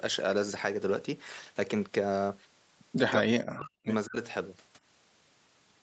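A speech recording, carried over a call path whose audio stops at 8 kHz, has its level collapse from 3.18 to 3.79 s, by roughly 40 dB, and again briefly from 4.05 to 4.16 s. This is likely speech suppressed in double talk: an echo canceller could not separate the talker here from overlapping far-end echo and turned both down. The voice dips, loses its high end or cuts out in pieces.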